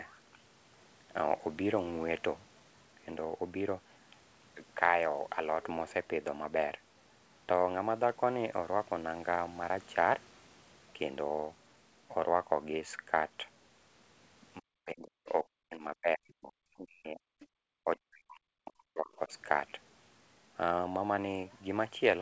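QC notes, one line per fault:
14.6–17.24 s and 17.84–19.33 s, speech suppressed in double talk: the speech sinks by as much as about 40 dB, thinning and breaking into pieces for roughly two seconds and then a second and a half. Both ends were likely talking at once, so the echo canceller pulled everything down.
17.52–17.56 s, background gated by the echo canceller: the room sound drops out by about 35 dB for a 40 ms gap, then returns. The canceller clamped the microphone hard while the far end's audio played through the loudspeaker, then released it.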